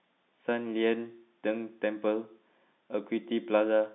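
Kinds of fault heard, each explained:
No kinds of fault are heard; the speech simply has the narrow band of G.711 telephone coding, with nothing above about 3.8 kHz.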